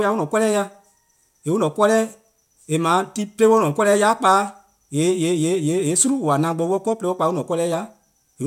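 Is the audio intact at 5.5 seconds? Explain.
No, aliasing runs through the whole clip, including 5.5 s. Content above 16 kHz folds back as faint gritty, metallic tones, which fits a 48 kHz to 32 kHz downsample without filtering.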